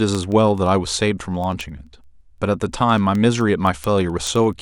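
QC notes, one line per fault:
0.15–4.53 s, word clock ticks: sharp ticks about every tenth of a second, around fifty across the speech, as a receiving device on its own unlocked clock slips against the sender's by roughly a couple of hundred ppm and drops or repeats one sample at each slip. Each slip is a tiny step discontinuity in the waveform. On a spectrogram they appear as thin, evenly spaced vertical broadband lines running through the speech.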